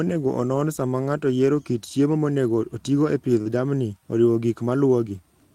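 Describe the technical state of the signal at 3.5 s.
Just before 3.5 s the speech carries a short concealed packet loss from 3.41 to 3.48 s. About 40 ms never reached the decoder in time, so the receiver extended the preceding sound, continuing its pitch where it was voiced or shaping noise where it was not, then blended back into the real signal. The result is a brief smear or wobble rather than a silent gap, and a short consonant there could be swallowed.

Overlapping its tail, from 3.455 to 3.475 s, is a lost packet rebuilt from error correction. This 20 ms stretch, which fits a single lost packet, was played from the low-bitrate copy that the following packet carried. It sounds rougher and noisier rather than smeared. That grainy texture, without the stretched pitch of concealment, tells it apart from the longer guessed segment before it.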